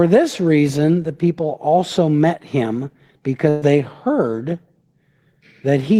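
At 3.49 s, just after "people also met him", a burst of packet loss runs to 3.64 s. The receiver fills about 120 ms by extending and fading the last sound, heard as a held, decaying tone, and then resumes before "they heard" with that stretch of speech missing.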